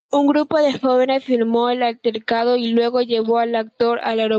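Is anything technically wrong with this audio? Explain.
Yes, there's gain pumping the whole way through, and it's likely coming from the mic gain set far too high with a fast limiter clamping down on every loud moment. The gain swings by something like 15 dB, so everything ends up squashed, with the call codec's top end stopping around 8 kHz.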